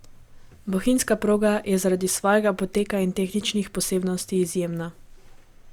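No technical faults can be heard in the recording.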